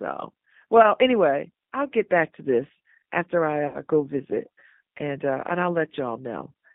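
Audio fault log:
throughout: G.729 codec. The sound is confined to roughly 150 Hz to 3.7 kHz and has a rough, synthetic edge, consistent with an 8 kbit/s coder rebuilding speech from a filter and sparse pulses. A spectrogram shows a hard ceiling near 3.7 kHz and blurred, grainy harmonics.
3.67 to 3.81 s: VoIP packet loss concealed by the speech codec. After "to this after I", the decoder fills a gap that fits about seven 10 ms frames by repeating its last pitch and filter. This produces a stretched, buzzy or noisy sound that fades before "go visit and uh" recovers weakly. The waveform shows a smooth decaying envelope, and the spectrogram shows a frozen spectrum.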